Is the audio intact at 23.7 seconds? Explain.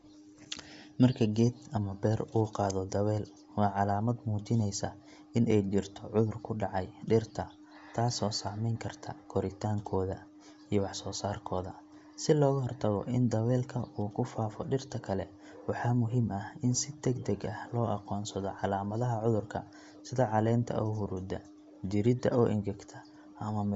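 No. Bluetooth LC3 compression affects the speech at 23.7 s, as it does throughout. This transform codec, likely the cause here, codes 10 ms frames and zeroes the upper spectrum, leaving nothing above 7.7 kHz and a grainy, breathy edge that fits roughly 32 kbps.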